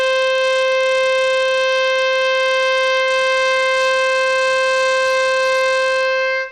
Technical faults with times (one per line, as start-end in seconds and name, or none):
0.00-6.51 Bluetooth SBC compression